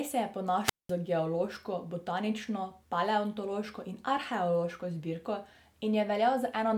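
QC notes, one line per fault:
0.64–0.92 s, wireless microphone squelch dropout: just after "se je" the radio link from the analogue FM transmitter weakened until the receiver's squelch gated its output shut. The fading carrier first lets hiss and static rise, then the mute leaves a hole of near silence lasting about 0.2 s, and the speech comes back as the signal recovers, resuming at "geološko botanično paleontološko in".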